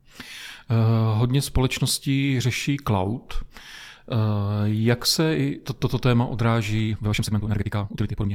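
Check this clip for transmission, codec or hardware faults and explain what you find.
One fault stands out, a time-stretched section near the end. From 6.85 s to the end, processing likely squeezed the speech to double speed while holding pitch, dropping short slices so it sounds rushed.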